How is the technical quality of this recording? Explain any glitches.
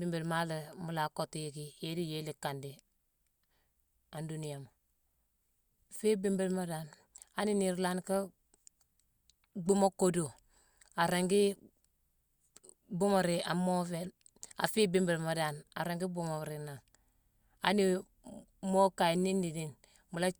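Nothing in the recording stood out as a technical problem on listening, so there are no glitches to explain.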